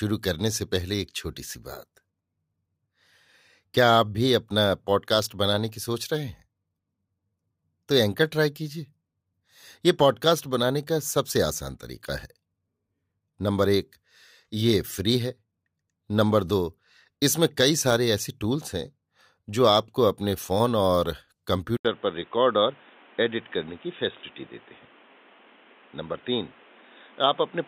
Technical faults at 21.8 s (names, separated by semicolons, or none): input switched to a poorer device